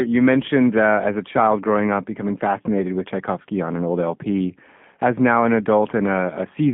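From start to finish the speech has passed through a G.729 codec, which fits an 8 kbit/s narrowband VoIP link. Each 10 ms frame is rebuilt from a vocal tract filter, a pitch predictor and a few coded pulses, over a telephone line band of roughly 150 Hz to 3.4 kHz, with nothing above 3.5 kHz. The voice sounds boxy and dull, and the coding damage is plainly audible as a rough, synthetic edge.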